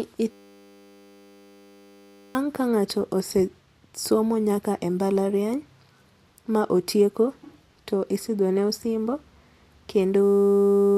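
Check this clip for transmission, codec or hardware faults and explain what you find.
A system hang loop appears twice, from 0.31 to 2.35 s and from 10.24 s to the end of the clip at about 11 s. In both, the machine or its audio driver stalled while the playback hardware kept cycling one 10 ms stretch of its ring buffer. That tiny slice repeats at 100 times a second, so the speech turns into a steady 100 Hz buzz. Around two seconds of speech is lost in the first event and roughly 0.7 s in the second.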